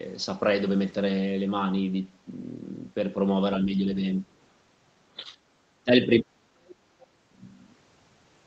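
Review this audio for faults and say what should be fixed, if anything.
The speech dips in four places: slightly at 3.64–3.86 s, almost to silence at 4.21–4.36 s, and moderately at 5.16–5.36 s and 5.84–6.23 s. This is likely speech suppressed in double talk, where the echo canceller turns down the near talker while the far side speaks. Better double-talk detection or gentler suppression would prevent it.

Faint scraps of the other side's voice leak through at 6.62–6.75 s and 6.99–7.07 s, roughly 25 to 30 dB below the speech. Residual loudspeaker echo likely escaped cancellation. Stronger echo cancellation, lower loudspeaker volume or a headset would stop it.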